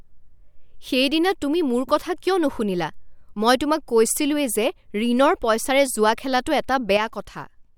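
A speech recording with a sudden gain jump at 6.97 s: the level drops by about 6 dB from one sample to the next and stays down until 7.76 s, the end of the audio. The speech and the background noise fall together, with no fade between the two levels, so the step is abrupt rather than a natural change in loudness. The likely cause is a digital gain setting applied instantly, without a ramp.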